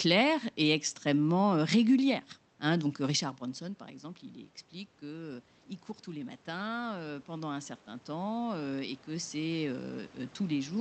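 Automatic gain rising begins at 6.05 s and continues to the end of the clip. The input level at the microphone dropped by about 16 dB, so the gain control judged the speech too quiet and raised its amplification step by step. Voice and room noise swell together over several seconds rather than jumping. Around 3 s the talker shifts position, and the Opus coding limits the top end to about 8 kHz.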